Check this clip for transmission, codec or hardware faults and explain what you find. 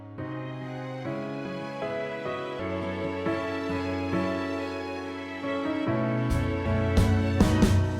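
There's one problem here, showing up three times: compressed frames skipped, at 1.45 s, 2.59 s and 6.65 to 6.68 s. Whole 20 ms frames never get played, either lost from the stream or rejected by the decoder as damaged, so the audio jumps forward roughly a tenth of a second at the first spot, around 300 ms at the second, and about 200 ms at the third. Each join comes across as an abrupt jump ahead in the audio.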